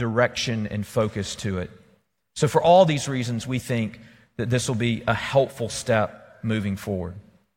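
Nothing in the speech stood out as a technical problem on listening.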